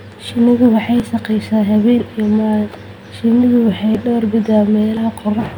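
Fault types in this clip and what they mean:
Dropped buffer (overrun): the speech jumps abruptly at 1.00 s and 3.95 s, each time skipping ahead by a short slice of about 20 ms, and at 4.97 s a longer stretch of roughly 70 ms vanishes. The likely cause is audio not being collected before the hardware overwrote it. Unlike an underrun dropout, no silent gap appears; the surrounding sound is spliced straight together.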